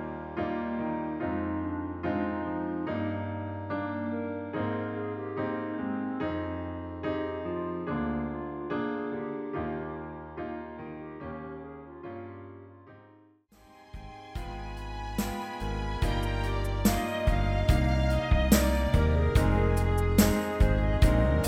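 Nothing in this recording stands out as a technical problem at any point.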